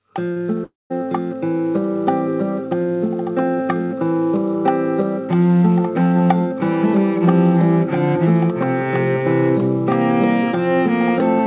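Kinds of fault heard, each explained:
Short concealed packet loss: At 0.32 to 0.38 s, about 40 ms of audio never reached the decoder in time. The receiver covered the gap by extending the last sound it had, then blended back into the real signal. The result is a brief smear or wobble rather than a clean cut. The call path already has nothing above 4 kHz, so the patch sounds dull and narrow.
Long network dropout: From 0.64 to 0.92 s the sound is replaced by something it never contained. The last sound is held as a buzz or hiss that fades out, and what is left is silence or a low, steady floor. The audio then returns partway on, and the stretch in between is simply gone. The likely cause is a run of packets that stopped arriving for roughly a quarter of a second.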